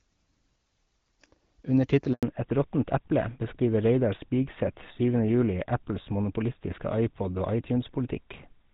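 At 2.13 s the speech cuts out for a handover gap lasting 100 ms, ending at 2.23 s. The call was being switched between networks, and no speech frames were delivered while the new link came up. The voice fades within a few tens of milliseconds into silence, and whatever was said across that tenth of a second is lost.

From 2.23 s to the end, the call shows a fallback to narrowband. Before the switch, the audio has the clear, full character of AMR-WB HD Voice, consistent with a rate around 12.65 kbit/s, with only light coding damage. After the handover, everything above 4 kHz disappears, which fits a move to GSM full rate at about 13 kbit/s. Sibilants lose their edge, and the voice sounds duller and rougher through the rest of the clip.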